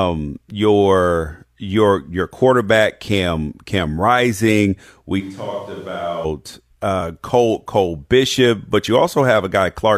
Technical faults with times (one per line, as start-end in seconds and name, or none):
5.22-6.24 switch to a distant microphone